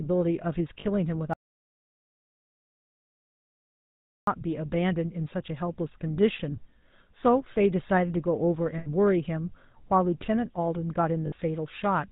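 Speech passed through the GSM full-rate codec, whose coarse pulse excitation fits a 13 kbps GSM link, leaves the whole recording buzzy and gravelly with nothing above 4 kHz. Lost GSM frames were concealed by repeating the last good frame's settings, giving brief rough, metallic rings at 0.80–0.85 s, 8.78–8.87 s and 11.26–11.33 s, lasting 40, 80 and 60 ms. The input was likely disconnected or muted from 1.34 to 4.27 s, an audio dropout to silence in which the sound cuts to silence for nearly 3 seconds, with no room tone left.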